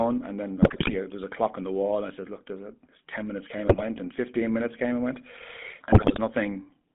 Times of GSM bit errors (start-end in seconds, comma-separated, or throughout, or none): 0.62-0.95, 3.68-3.84, 5.92-6.19